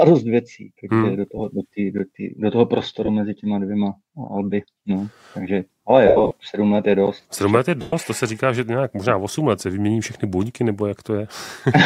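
The audio has lost LE Audio frames at 1.38–1.40 s, 3.06–3.08 s, 6.06–6.32 s and 7.81–7.93 s. In each gap the LC3 decoder replays the last spectrum with scrambled signs, so tones blur into a noisy smear. A plain dropout would instead click or cut straight to silence. The 6.06 s stretch is scattered losses totalling 195 ms, its longest run around 70 ms. The 112.5 ms gap at 7.81 s fades toward silence as concealment gives out. Light codec softening from ordinary lossy compression sits underneath.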